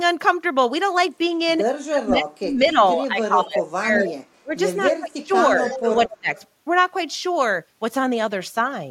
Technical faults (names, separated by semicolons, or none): speech suppressed in double talk; echo leak